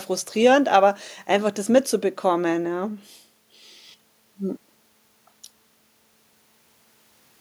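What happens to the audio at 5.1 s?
Nothing goes wrong at 5.1 s; the speech there plays through intact, with no dropout, click, distortion or other audible fault at that moment.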